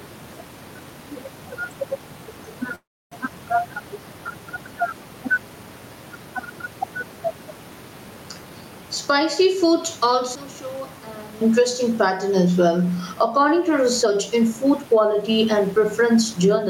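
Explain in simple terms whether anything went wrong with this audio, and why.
Several things went wrong. Throughout the clip, the loud and soft parts of the speech are pulled closer together in level. This is gain pumping. The likely cause is the microphone level set far too high, with an automatic limiter pulling it back on each loud sound. It squashes the speech.

From 2.75 to 3.14 s the sound stalls. It briefly trails on, then goes quiet for about a third of a second before picking up exactly where it stopped. This is a call audio freeze, likely from delayed network packets leaving the receiver with nothing to play. Nothing is lost, but the rest of the clip now runs later.

Between 10.35 and 11.41 s the speech almost disappears and turns faint. This is one channel inverted. One stereo side was likely flipped upside down, so when the two sides are combined, the centred speech cancels itself out.

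From 14.03 s to the end, the speech runs about 10% faster but keeps its normal pitch, so it sounds rushed. This is a jitter buffer speed-up. The receiver had built up too much waiting audio and trimmed tiny slices, about a third of a second in total, to catch up.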